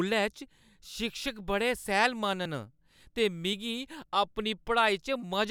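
Speech clip with two points where the audio jumps forward, at 2.46 s and 3.53 s, losing roughly 10 ms and 5 ms, likely dropped buffers (overrun).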